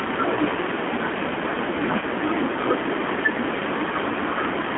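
Throughout, the speech carries G.729 codec damage. It is rebuilt at 8 kbit/s from a filter and sparse pulses, so it sounds rough and synthetic, and the spectrogram is confined to about 250 Hz to 3.4 kHz. At 0.36–0.39 s and 2.00–2.05 s, VoIP packet loss concealed by the speech codec stretches the last pitch over about 10 ms, then 20 ms. The result is a fading buzzy tone or coloured noise that shows as a sagging waveform envelope.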